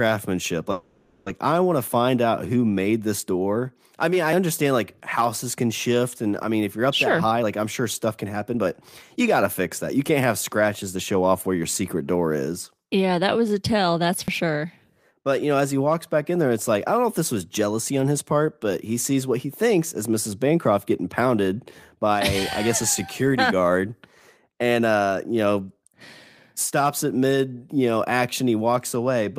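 From 0.71 to 1.28 s the speech stops and the last sound is stretched into a fading buzz for about 550 ms before resuming exactly where it left off, with nothing lost. This is a call audio freeze, most likely caused by packets held up in transit until the jitter buffer ran dry. The receiver filled the wait with synthetic continuation, adding a 550 ms delay to the stream.

At 4.33 s, between "this door I mean" and "understand like houses can", a short piece of audio vanishes and the two sides butt together with no silence. This sounds like audio missing between chunks, likely from a recorder or processor dropping roughly 50 ms while switching buffers. The same skip recurs at 14.28 s, just after "was a tell that's". The two skips are about 10 seconds apart, which fits a processor working in 10-second chunks.

From 7.14 to 9.42 s the speech runs noticeably fast, about 117% of normal speed, without any change in pitch. 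This is a jitter buffer speed-up: the buffer had accumulated excess audio, and the receiver trimmed short pitch-period slices repeatedly, removing roughly 400 ms. A milder second pass follows from 9.90 to 11.98 s, between "to fix" and "door is". It plays at 107% and cuts roughly 150 ms, making the phrasing sound slightly hurried.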